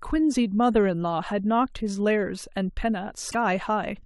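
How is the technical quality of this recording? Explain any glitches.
There is one glitch, near the end of the speech. From 3.28 to 3.35 s there is damaged data in the compressed stream: a stretch of roughly 70 ms where the encoded bytes no longer match valid frames. The decoder misinterprets or rejects those frames, loses its frame alignment and scans forward for the next valid header before normal decoding resumes. The result is a brief chirp, squawk, click or short hole in place of the intended audio.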